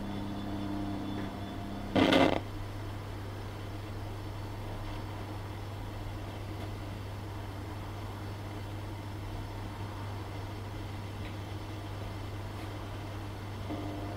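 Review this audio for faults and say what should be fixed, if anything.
No faults can be heard, so nothing needs fixing.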